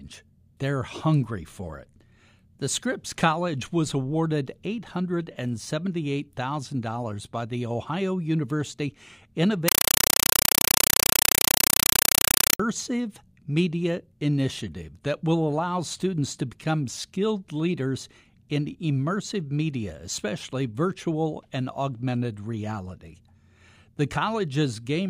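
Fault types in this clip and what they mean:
Compressed stream played as audio: from 9.68 to 12.60 s an undecoded Dolby Digital stream is treated as ordinary samples, replacing the speech with very loud, chattering static. It comes as 5.33 ms noise bursts repeating 31.25 times a second, fitting a 256 kbps AC-3 stream.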